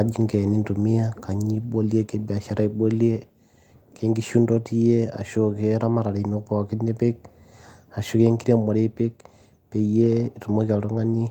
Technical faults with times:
none

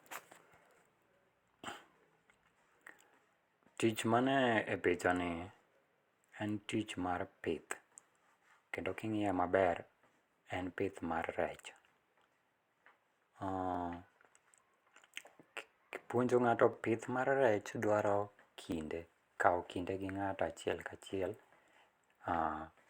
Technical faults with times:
0.78-22.72 periodic USB or driver dropouts

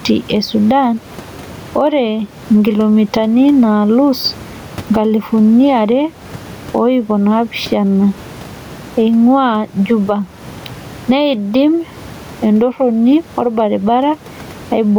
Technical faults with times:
0.00-14.99 gain pumping

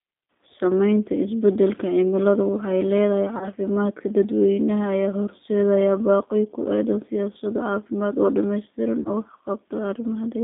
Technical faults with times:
0.00-10.44 G.729 codec
3.38-3.49 VoIP packet loss concealed by the speech codec
9.02-9.11 VoIP packet loss concealed by the speech codec

